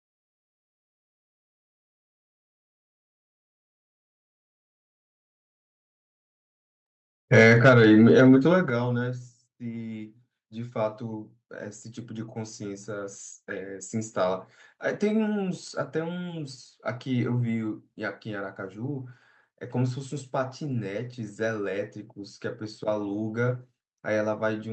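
Microphone overload from 7.34 to 8.36 s in this speech recording puts a harsh, crackling edge on the loudest syllables. The likely cause is an input level running about 4 dB past the converter's ceiling, so roughly 2 percent of samples have their tops flattened. Microphone volume stepped down at 7.7 s and again at 8.7 s, with the voice and background dropping abruptly by about 3 dB and then about 7 dB. This is likely the call software reacting to those clipped peaks by cutting the device's input gain in discrete steps.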